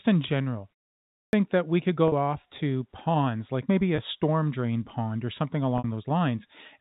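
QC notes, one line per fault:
1.03–1.33 s, clipped start after a pause: after a short gap of about 0.37 s, the sound resumes abruptly, with roughly the first 300 ms missing. The onset lacks any natural build-up and jumps straight in mid-sound. This points to the playback device dropping into a low-power or unlocked state during the brief silence and needing time to wake, so the opening portion is discarded before output is restored.
2.08 s, 3.96 s and 5.78 s, packet loss with pitch repetition: three short dropouts of 40 ms, 20 ms and 60 ms respectively, which fit losses of two, one and three 20 ms packets. Each gap is bridged by repeating the last pitch cycle, heard as a brief held, slightly buzzy tone. The 60 ms gap at 5.78 s is long enough for the repeated cycle to start fading before normal audio cross-fades back in. All three sit over the narrowband telephone-grade signal.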